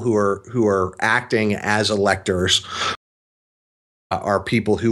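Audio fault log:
2.95–4.12 s, stream reconnect: the speech drops to silence for about 1.16 s, then picks up again at a point roughly a fifth of a second further on than where it stopped, so a short stretch of the talk never arrives. The player lost its connection, sat silent while it re-established the stream, and then started a new decoder on whatever the live feed was delivering by then rather than resuming from the break.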